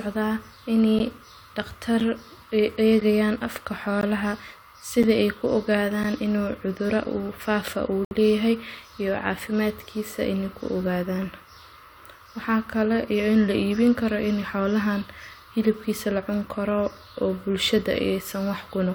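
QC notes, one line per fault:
0.99, 2.00, 3.01, 4.01, 5.03, 6.03, 7.04 and 8.05–8.11 s, gap between stream segments: Hard-edged silent holes recur once per second. Each 1-second segment starts late. The holes last 7 to 16 ms, and the last one lasts 64 ms.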